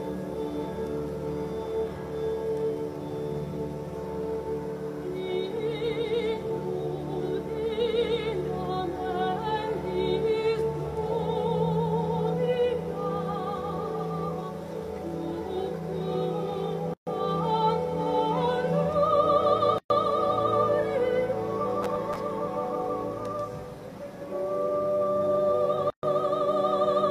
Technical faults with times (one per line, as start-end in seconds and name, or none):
16.94-17.07 gap at a join of encoded pieces
19.78-19.90 gap at a join of encoded pieces
21.83-22.16 processor overload crackle
25.90-26.03 gap at a join of encoded pieces